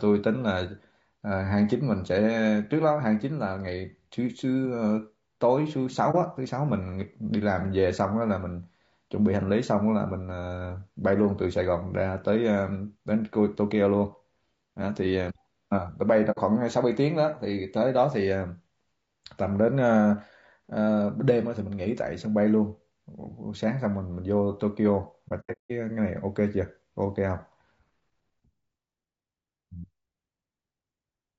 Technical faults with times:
0.00-31.39 low-delay AAC compression
6.11-6.15 AAC frame loss with muting
16.31-16.39 AAC frame loss with muting
25.28-25.71 AAC frame loss with muting

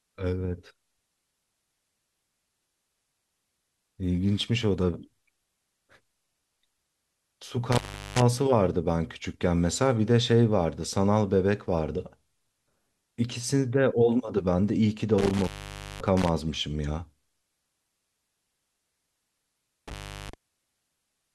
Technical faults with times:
7.72-8.22 intermittent contact
15.18-16.29 intermittent contact
19.88-20.34 intermittent contact

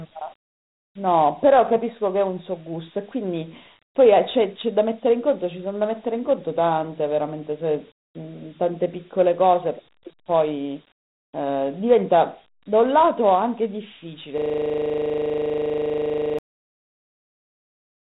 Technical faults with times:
0.00-18.10 Dialogic VOX ADPCM
14.38-16.39 system hang loop

